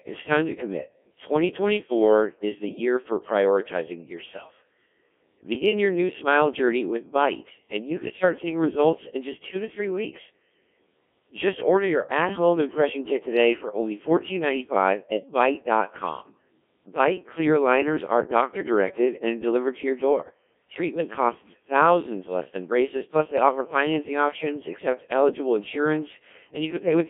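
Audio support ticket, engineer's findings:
Robotic, buzzy speech across the whole clip, band roughly 250 Hz to 3.5 kHz. Component: Codec 2 vocoder, sound consistent with a 1.3 kbit/s mode. Mechanism: only pitch, voicing, energy and envelope transmitted; decoder rebuilds speech from sine waves, original waveform discarded. Heavy damage. Differs from transform-codec starvation: no swirly or smeared artefacts, only synthetic, buzzy resynthesis.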